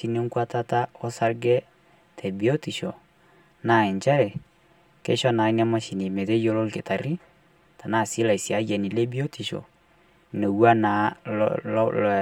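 Speech with channel delay (comb filtering) throughout: one channel lags the other by about 5 ms, and summing them to mono cancels shared content at evenly spaced frequencies, starting near 100 Hz and repeating roughly every 200 Hz, leaving the sound hollow and phasey.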